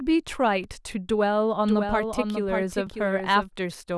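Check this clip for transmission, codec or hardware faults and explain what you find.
Two kinds of fault turn up in this speech clip.

At 0.64 s and 2.87 s, a block of digital silence: zeroed samples of about 2 ms and 4 ms. Because they are hard-edged drops to zero rather than smeared distortion, each lands as a sharp tick.

From 1.67 s to 3.49 s, a doubled audio track: a second copy trails roughly 0.7 s behind at about 5 dB lower. It is likely a second, slower capture path. Unlike room echo, it is dry and full-band, and it starts and stops abruptly.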